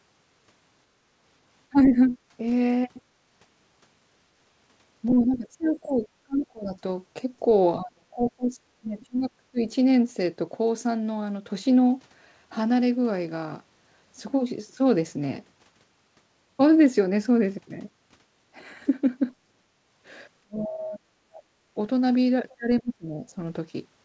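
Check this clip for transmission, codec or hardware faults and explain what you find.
The clip has three echo-canceller faults: speech suppressed in double talk, background gated by the echo canceller, and the other side's voice leaking through. All of it sits inside a call-codec band with nothing above 8 kHz, which fits G.722 at 64 kbps.

Speech suppressed in double talk, from 1.7 to 2.17 s, 5.2 to 9.59 s and 20.43 to 23.37 s, is likely caused by the canceller mistaking the local talker for loudspeaker echo while both ends spoke, and then attenuating everything. The speech sinks and breaks up. The first dip is a brief loss of around 15 dB. The middle stretch is chopped for roughly three seconds, with drops near 30 dB. The last loses well over a second, with drops approaching 35 dB.

Background gated by the echo canceller, from 3.02 to 3.13 s, happens when the canceller clamps the microphone while the loudspeaker is active. 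The room tone falls away by about 13 dB for roughly a tenth of a second and then snaps back as the suppression releases. The result is a short, unnatural hole in the ambience rather than a fade.

The other side's voice leaking through, from 5.1 to 6.45 s, 8.29 to 9.06 s and 22.49 to 22.81 s, is likely residual loudspeaker echo that the canceller failed to subtract from the microphone signal. A second, fainter voice sits behind the talker. In the first stretch it is about 15 dB below the speech. In the second it is fainter, around 25 dB down, and in the final brief scrap it is about 30 dB down.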